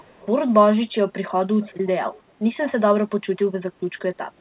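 From 0 to 0.27 s, 1.61 to 1.77 s and 2.14 to 2.22 s, a faint echo leak trails the speech by about 0.41 s. It sits well below the voice. Likely, the far end's echo canceller let its loudspeaker pickup return. Everything stays band-limited below 4 kHz.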